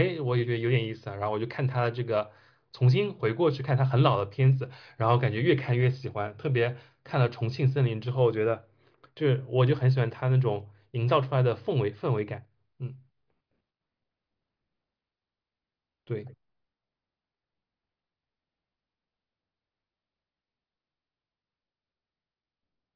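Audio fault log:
Nothing to log here, as this speech recording came through without any technical trouble worth noting.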